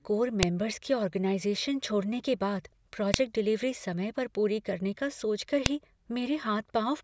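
At 0.43 s (before "के ऑर्गेनाइज़ेशन छोड़ने के"), 3.14 s (after "ऑर्गेनाइज़ेशन छोड़ने के बाद") and 5.66 s, file header played as audio: leftover WAV header bytes at joins snap sharply, showing as tall waveform spikes and thin broadband spectrogram lines.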